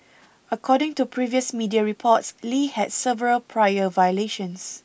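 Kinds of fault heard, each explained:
No technical faults detected.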